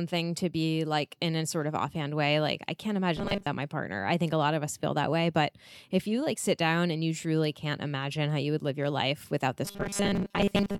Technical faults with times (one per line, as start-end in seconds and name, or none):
3.17-3.48 robotic sound from repeated short buffers
9.65-10.79 robotic sound from repeated short buffers